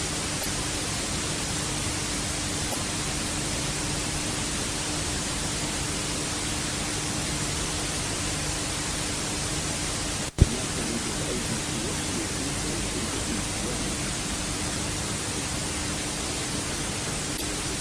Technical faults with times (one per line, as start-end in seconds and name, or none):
0.38-0.46 damaged data in a compressed stream
2.68-2.76 damaged data in a compressed stream
17.33-17.42 damaged data in a compressed stream